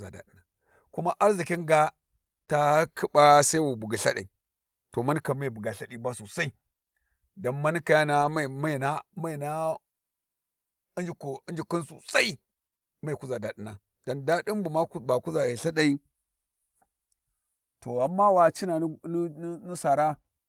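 Speech, with three short patches of lost packet rebuilt from error correction, at 8.21–8.31 s, 13.43–13.45 s and 18.05–18.11 s. The rebuilt stretches run about 60 ms, 20 ms and 40 ms, which fits one to three lost packets each time. The decoder filled each loss with the low-bitrate copy carried in the next packet, so nothing drops out. The waveform stays continuous with no flat gap. On a spectrogram, each patch shows grainier, noisier detail than the surrounding speech, and the sound is briefly rough.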